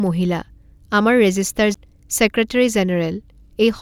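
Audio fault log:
1.74 s CD skip: a brief tick with a dropout of roughly 10 ms, after which the speech carries on from a slightly different place, so the flow of the sound lurches rather than continuing smoothly. The laser was knocked or met a flaw on the disc and jumped to another turn of the spiral. The player muted for that instant and resumed reading from the new track position, joining two passages that were never adjacent.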